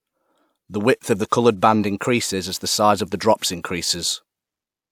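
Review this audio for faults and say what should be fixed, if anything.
Nothing here needs fixing, since no faults turn up anywhere in this speech recording.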